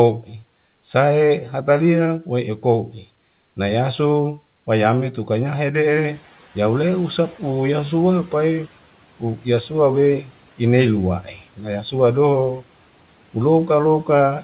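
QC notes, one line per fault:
5.9–8.67 s, noise suppressor catching up: the room noise jumps by about 13 dB around 6 s, and the suppressor's noise estimate lags behind it. The louder background first comes through with too little reduction, then sinks over roughly 2.77 s as the estimate adapts, ending about 10 dB lower. In this narrowband signal, which stops near 4 kHz, the result is background noise that comes through strongly at first and then sinks.
9.2–9.46 s, 10.22–10.31 s, 11.23–11.39 s, speech cut by the noise suppressor: after the noise rise, the suppressor takes brief parts of the speech for background and turns them down with it. The deepest drops are about 11 dB, 9 dB and 7 dB, each over around a tenth of a second. Those moments sound swallowed or faint, with the dips easing as the clip goes on.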